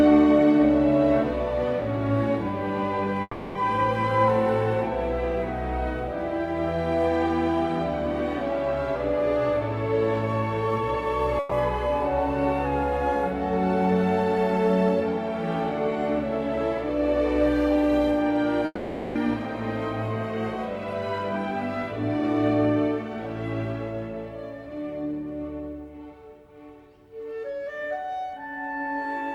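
At 3.21 to 3.57 s the audio stops advancing. The last sound is stretched into a decaying buzz or hiss for about 340 ms, then about 30 ms of silence follows before playback resumes with that section missing. The likely cause is a long network dropout.

At 11.39 to 11.53 s a burst of packet loss removes about 120 ms. The receiver fills the gap by continuing the preceding sound at falling level, with no silence, and the audio picks up further along.

At 18.65 to 19.17 s a similar long network dropout likely repeats on a larger scale. About 500 ms is concealed as a fading extension of the last sound, followed by about 30 ms of silence, and the lost portion never returns.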